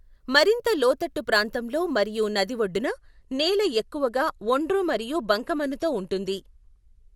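Speech, with an adaptive stream at a lower bitrate taking over from 2.86 s to the end: the player switched down abruptly, apparently from about 96 to 48 kbit/s AAC, without any gap. The top end then stops near 12.4 kHz and coding artefacts thicken.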